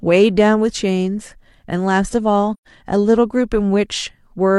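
At 2.53 s the speech fades softly into a brief gap of silence and fades back by 2.67 s. This is AAC frame loss with muting: a run of lost frames, which fits about three frames, had their spectrum zeroed, and overlapping windows smoothed the edges of the hole.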